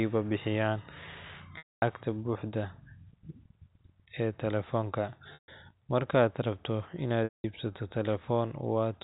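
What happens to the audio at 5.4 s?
Packet loss with pitch repetition hits from 5.34 to 5.48 s, a 140 ms gap, which fits seven 20 ms packets. The receiver loops the last pitch period, so a held buzz fades over roughly 50 ms into silence before speech cross-fades back. On a waveform, identical cycles shrink to a flat line. On a spectrogram, frozen harmonic stripes give way to an empty band.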